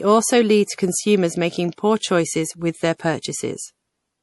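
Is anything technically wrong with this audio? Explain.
Yes. Throughout the speech the sound is watery and swirly, with nothing above 11.5 kHz. This is likely MP3 compression: starved of bits, the encoder cut the treble and let weak frequency lines flicker between frames, which fits a bitrate of about 48 kbps.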